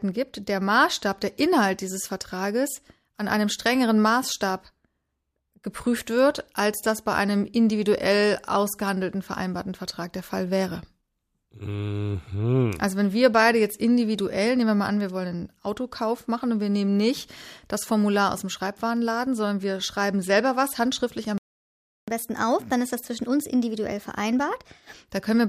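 A speech recording in which the player likely ran dry of buffered data or had its output thread held up, producing a playback stall: the speech cuts to silence in mid-flow at 21.38 s and stays silent for about 0.7 s, until 22.08 s, before resuming. The gap is an abrupt hole in the middle of continuous speech, not a natural pause, which is what marks it as a delivery failure rather than part of the recording. Having fallen behind, the player then performs a catch-up at higher speed, resampling its backlog to run at 1.15 times normal rate from 22.08 s to 25.08 s. Because resampling changes speed and pitch together, the speech over those three seconds sounds hurried and raised by roughly two semitones, giving a slightly chipmunk-like quality, and then drops back to its normal rate and pitch at 25.08 s.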